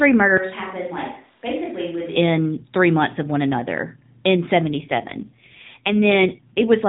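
A speech clip carried over an AMR narrowband mobile link, band-limited to 4 kHz with light codec roughness throughout, has an AMR rate drop from 4.62 s to 6.64 s, just after "of one another in". The voice turns buzzier and more synthetic, which points to the codec stepping down from 12.2 kbps to around 5.9 kbps to protect a weak radio link. On a spectrogram the 4 kHz ceiling stays put and nothing goes missing, but harmonics look smeared and coarser. The waveform runs continuously with no gap, then the roughness eases as the rate recovers.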